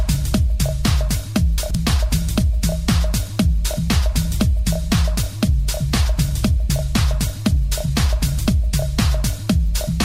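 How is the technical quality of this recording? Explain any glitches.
One glitch stands out, a brief scrambled moment early in the clip.

Chunks out of order, from 1.58 to 1.75 s: a block of audio about 43 ms long plays three blocks later than it should, after the material meant to follow it. Nothing goes missing, but the sequence is shuffled and there are three abrupt joins. The result is a short jumbled stutter in the sound.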